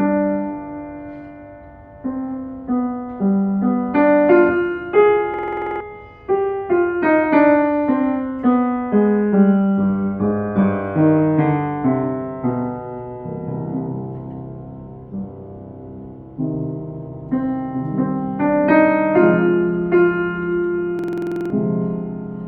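At 5.34 s, and again at 20.99 s, you get a system hang loop: the machine stalled while the sound hardware kept replaying its ring buffer. A 46.4 ms slice, which fits a 2048-sample buffer, repeats about ten or eleven times at 21.5 Hz, giving a rattly machine-gun stutter for roughly half a second each time, ending at 5.81 s and 21.50 s. Whatever should have played then is simply gone.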